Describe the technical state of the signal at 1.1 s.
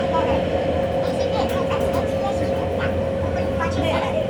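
At 1.1 s, as across the whole clip, the sound runs fast and sits noticeably high, about 1.5 times normal speed and raised by 7.02 semitones. This is a wrong sample rate fault: samples are replayed faster than they were captured, without conversion, which fits 32 kHz material played at 48 kHz.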